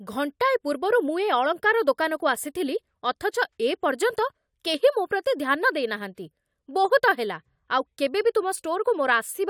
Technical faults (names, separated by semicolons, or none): none